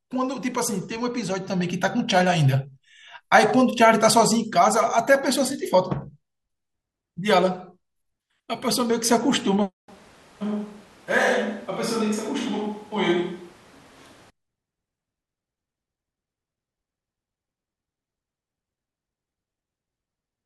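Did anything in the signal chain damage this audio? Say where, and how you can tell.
Yes, at capture: from 9.89 to 14.30 s the speech abruptly turns roomy, thin and about 5 dB quieter, likely a switch to a distant microphone.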